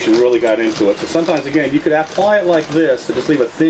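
Throughout, the gain swings by around 10 dB, pulling down under each loud sound, leaving everything squashed: gain pumping, likely from input gain set far too high with a fast limiter clamping down.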